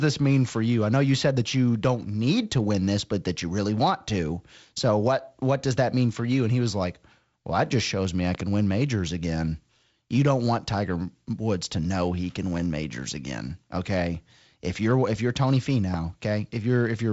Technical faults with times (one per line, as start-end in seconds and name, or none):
8.35-8.43 loud pop
15.94-15.96 loud pop